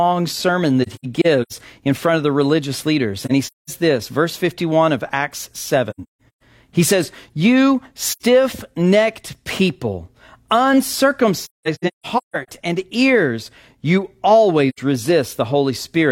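AAC frame loss with muting hits the speech six times: 0.82–1.52 s, 3.23–3.70 s, 5.90–6.42 s, 8.09–8.22 s, 11.43–12.48 s and 14.69–14.79 s. The missing frames decode as silence, so the sound fades out and back in, leaving soft-edged holes. The longest single gaps are around 200 ms.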